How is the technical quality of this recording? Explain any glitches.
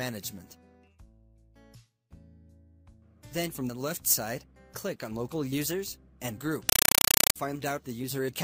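One fault stands out, near the end of the recording.

Compressed stream played as audio, 6.69 to 7.36 s: a 256 kbps AC-3 (Dolby Digital) bitstream was treated as plain samples instead of being decoded. Each frame becomes a 5.33 ms noise burst followed by padding, repeating at 31.25 Hz, so the sound is replaced by loud, chattering static.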